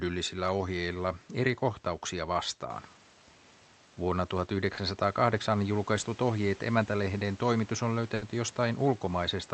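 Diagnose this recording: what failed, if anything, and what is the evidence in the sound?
Network stage, short concealed packet loss: around 4.73 to 4.79 s there's a brief smear where about 40 ms of the call simply didn't arrive in time. The receiver papered over the hole by extending the last bit of speech, then crossfaded back into the real signal, so you get a little wobble rather than a clean dropout. The slot is filled with the stretched-out tail of what came before.

Also network, a burst of packet loss: right after "ohjeet emäntälehden toimitus on", from about 8.15 to 8.23 s, roughly 60 ms went missing in one go. The concealment continued the preceding speech and faded it as the gap runs on, then the speech picks up further along with that stretch skipped. It's all delivery timing; the call codec's roughly 8 kHz top end and the room noise stepping up near 2.5 s are separate.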